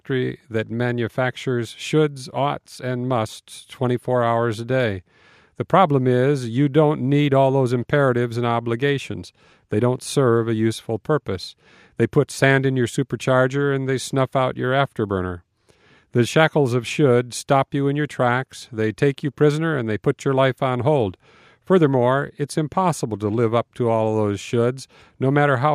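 Nothing here points to a technical fault; the audio simply runs its course without any audible problems to flag.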